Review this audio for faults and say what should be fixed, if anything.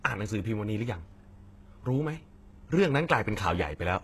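HE-AAC compression runs throughout the clip. The treble has a synthetic, metallic sheen, s sounds come across gritty and lispy, and nothing reaches above about 12.3 kHz. This is likely spectral band replication: only the lower band is truly coded, and the upper band is patched in from copied lower content under a coarse envelope, so its harmonics never align with the real ones. The plainly audible damage fits a very low bitrate near 16 kbps. To prevent it, encode speech at a higher bitrate with plain AAC-LC or Opus instead of low-rate HE-AAC.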